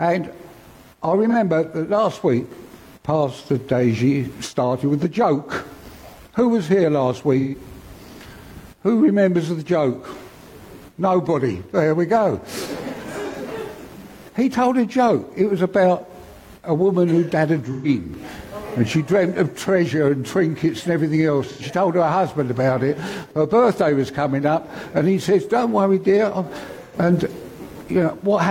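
AAC frame loss with concealment hits at 1.29–1.35 s, 7.39–7.55 s, 13.28–13.34 s, 17.71–17.88 s, 21.50–21.62 s and 26.84–26.95 s. Gaps of about 43, 85 and 128 ms fit one, two and three lost frames. The decoder rebuilds each gap from the last good spectrum, so the sound turns smeared and phasey. On a spectrogram these patches show as blurred, frozen bands, and the waveform loses its transients.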